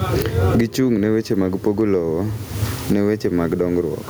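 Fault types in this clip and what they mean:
Gain pumping: throughout the clip, the level breathes with the speech. Each loud syllable pulls the overall level down, and in the pauses it climbs back, a swing of roughly 25 dB. The room noise sits about 39 dB below the speech. This is likely microphone gain set far too high, with a fast limiter or compressor clamping it back on every peak and squashing loud and soft passages together.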